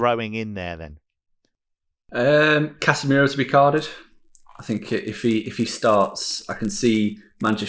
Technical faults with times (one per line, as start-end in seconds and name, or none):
3.77-7.68 resampler restarted on every block